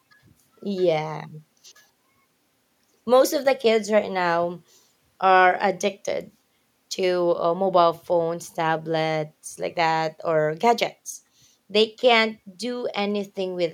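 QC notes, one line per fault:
No faults heard in the speech at any point.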